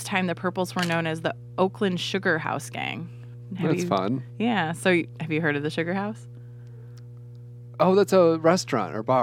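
A ground loop or nearby transformer is leaking the 60 Hz power line into the signal, laying a steady mains hum roughly 20 dB below the speech throughout.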